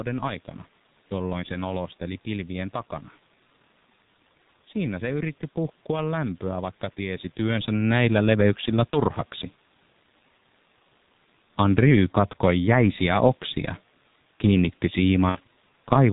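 G.723.1 codec damage runs through the whole 16 s speech recording: at 6.3 kbit/s with 30 ms frames and nothing above 4 kHz, the voice is heavily muffled and hoarse, with consonants smeared. VoIP packet loss concealed by the speech codec appears at 8.90 to 8.99 s, just after "tiesi työnsä näillä leveyksillä", which fits one lost 30 ms frame, and again at 15.29 to 15.40 s, which fits two lost frames, about 60 ms. In both places the decoder extrapolates from its last pitch and filter with fading gain, and the voice stays weakened briefly afterwards. The room noise and the level change around 7 s, when the talker shifts position, come from the recording itself.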